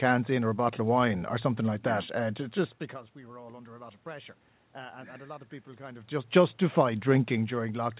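Nothing stood out on listening to this speech as a technical fault.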